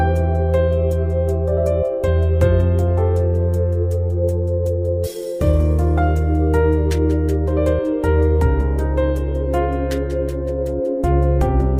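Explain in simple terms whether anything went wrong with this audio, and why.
Nothing went wrong: no faults are audible anywhere in the recording.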